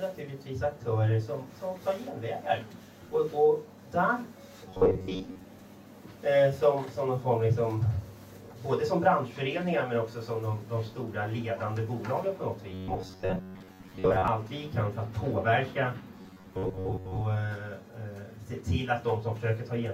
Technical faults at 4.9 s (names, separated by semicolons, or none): robotic sound from repeated short buffers